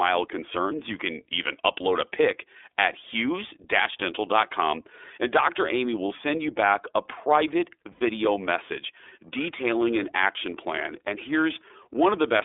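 Throughout, the speech carries plainly audible iLBC codec damage, confined to about 300 Hz to 3.6 kHz, with a rough, synthetic texture that fits its 13.33 kbps, 30 ms frame mode. At 7.92 s, just after "you back a private", lost iLBC frames leave a 90 ms held, buzzy vowel, which fits three concealed frames, before the voice recovers immediately. From 9.22 s to the end, periodic clock jitter at around 1 kHz adds sidebands that give the speech a rough, metallic edge that disappears in pauses.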